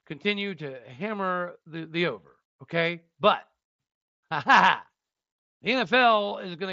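Speech over what sounds like a wideband Bluetooth headset link, with mSBC's 8 kHz ceiling and a faint graininess on louder syllables. The one real problem is a short concealed Bluetooth headset packet loss at about 6.30 s, a gap of roughly 15 ms, which points to a couple of lost frames. The receiver patched it by repeating the closest-matching recent stretch of waveform, so it comes through as a tiny buzzy blip before normal audio resumes.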